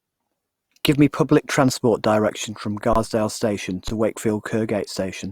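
At 2.93 to 2.96 s, and again at 3.88 s, the speech freezes in an underrun with held sample: the buffer ran dry, leaving a 1024-sample gap the first time, and the output held its last value. Unlike a zero dropout, it holds a flat level with little or no onset click, and about 15 to 20 ms of audio was lost.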